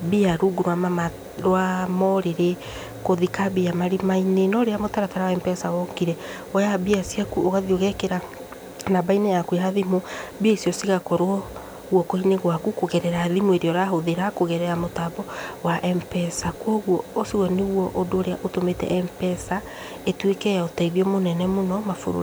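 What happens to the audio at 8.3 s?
At 8.3 s you're hearing low bit depth with dither, and it runs through the whole clip. The speech sits at 8 bits with dither added before rounding, so the error turns into a steady, even hiss around 30 dB below the speech, with no distortion.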